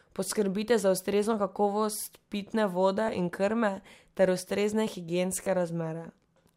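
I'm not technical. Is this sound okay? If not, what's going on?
No. There is a Bluetooth stutter at 3.07 s and again from 5.44 to 5.47 s. Wireless data arrived late or went missing, so the receiver briefly replayed the last tiny slice of speech, then jumped ahead, skipping about 13 ms and then about 27 ms.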